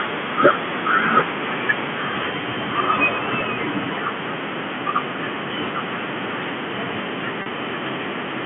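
At 3.41 s and from 7.42 to 7.46 s, packet loss with pitch repetition: lost audio, 10 ms then 40 ms, was patched by repeating the last pitch period, giving a brief held, buzzy tone.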